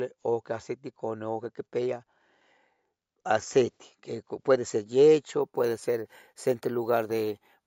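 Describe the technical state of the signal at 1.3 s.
Nothing audible goes wrong at 1.3 s; the speech signal is intact at that moment.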